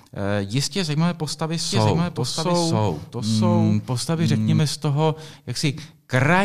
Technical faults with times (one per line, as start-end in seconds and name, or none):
1.70-4.60 doubled audio track